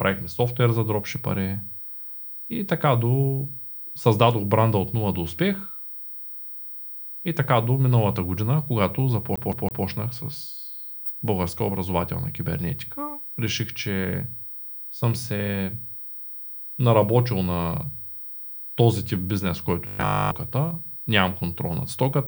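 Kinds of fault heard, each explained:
CD stuck on one turn: from 9.36 to 9.85 s, just after "до миналата година когато", the same 0.16 s slice of speech plays three times, each restart marked by a brief mute, as if the laser jumps back one track at a scratch on every rotation.
Robotic sound from repeated short buffers: from 19.87 to 20.31 s, right after "този тип бизнес", the speech becomes a rigid metallic 50 Hz buzz across the whole stretch. The likely cause is late audio being covered by looping the last chunk, which fits a 20 ms buffer.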